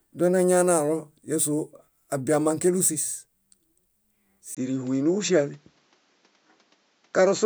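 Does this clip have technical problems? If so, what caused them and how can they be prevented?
Yes. At 4.55 s there's a 20 ms gap, then to the end the speech loses everything above 7.6 kHz and picks up faint new background noise while its level stays roughly unchanged, likely the input switched to a poorer device. Pin the recording input so it can't change mid-take.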